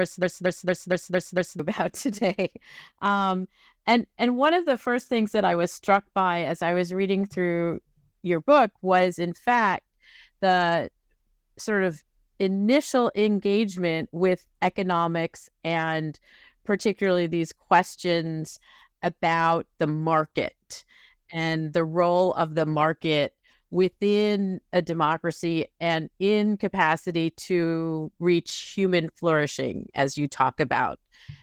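A speech clip with two technical faults. From 0.0 to 1.60 s there is a broken-record loop, already running when the clip begins. A piece about 0.23 s long repeats exactly, back to back, six times. The likely cause is a player, encoder or stream that stalled and kept resending the last fragment it held. Whatever should have played in that stretch is gone. Opus voice compression runs throughout, and its damage is plainly audible. The speech sounds muffled, hoarse and somewhat robotic. That fits the codec's hybrid mode. A linear-prediction coder handles the low band, and a thin transform layer covers the top. The excitation is coded coarsely. This points to a low bitrate around 16 kbps with 20 ms frames.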